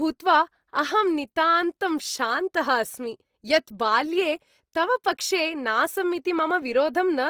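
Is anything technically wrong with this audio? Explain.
Yes. Throughout the speech there is plainly audible Opus compression damage, likely from the Opus codec's music (CELT) mode at a low bitrate, which fits roughly 24 kbps. When bits run short, this mode keeps each band's energy but fills in detail with folded copies of lower bands or noise. Harmonics sound rough, grainy and noisy rather than swirly. On a spectrogram the content still extends to about 20.2 kHz with few empty holes, but the upper bands look speckled and noise-textured instead of showing clean harmonic lines.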